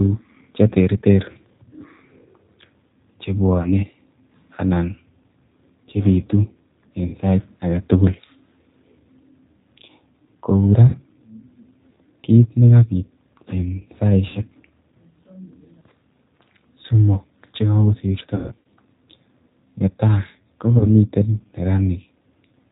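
A G.729 codec, consistent with the 8 kbit/s G.729A variant, rebuilds the speech from a filter and sparse pulses throughout, cutting everything above 4 kHz and leaving it rough and synthetic. VoIP packet loss concealed by the speech codec strikes at 3.62, 7.07, 10.88, 14.29, 18.35 to 18.66 and 20.78 s. The decoder extrapolates across the gaps, so each one turns into a buzzy or noisy, fading smear that stays weak briefly afterwards. The 18.35 s stretch is the longest, with scattered losses that include a run of about 150 ms.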